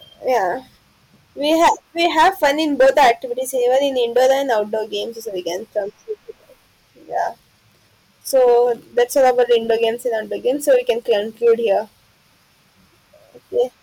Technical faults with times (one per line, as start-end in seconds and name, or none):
0.31-0.37 hard clipping
1.49-3.11 hard clipping
3.74-3.78 hard clipping
4.16-4.54 hard clipping
8.35-8.60 hard clipping
8.98-9.84 hard clipping
10.69-11.77 hard clipping